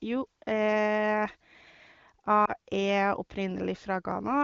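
At about 2.46 s there's a lost AMR speech frame. The audio dips and warbles briefly, and the disturbance lasts until roughly 2.53 s. Only one 20 ms frame went missing, most likely to a radio error that failed its checksum. The AMR wideband (HD Voice) decoder covered the gap by reusing the last good pitch and vocal tract settings at reduced gain. Because the run is just one frame, the speech doesn't stretch out or fade to silence. It wobbles for a moment and then the voice recovers.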